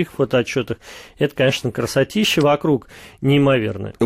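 No technical faults can be heard in this speech recording. There is nothing here to place on the timeline.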